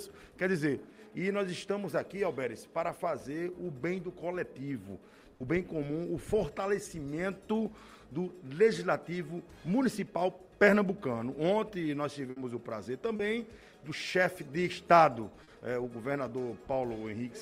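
The audio has two bursts of packet loss, at 5.34 to 5.41 s and at 12.30 to 12.37 s. In each, about 60 ms of signal failed to arrive in time. The receiver kept extending the last sound it had and faded it down, then picked up again further along with those 60 ms gone. On a spectrogram each burst shows as a band of frozen, smeared harmonics or noise that dims toward its end, followed by a jump where the real signal returns. The waveform shows a repeated, decaying stretch. There are also two instances of short concealed packet loss, at 13.16 to 13.20 s (30 ms) and 15.43 to 15.48 s (40 ms). Here the decoder briefly synthesized a continuation of the preceding sound and then cross-faded back into real audio. Each is heard as a quick smear or wobble. On a spectrogram it appears as a thin vertical strip of blurred, overly steady energy, and on the waveform as a tiny section that is too regular.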